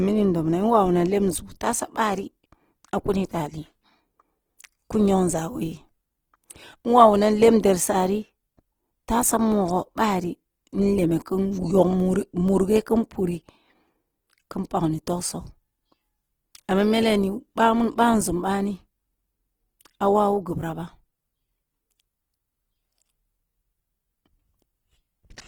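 Throughout the recording, the speech has likely passed through Opus compression at a very low bitrate, with a sound that fits roughly 16 kbps in the codec's music-oriented CELT mode. Starved of bits, the encoder keeps each band's overall energy but fills the detail by copying lower bands or with noise. The bandwidth stays full, reaching about 20.2 kHz, yet the voice comes across plainly grainy, rough and hissy instead of swirly.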